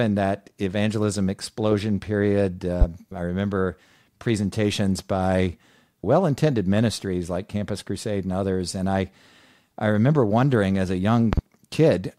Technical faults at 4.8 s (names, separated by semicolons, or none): none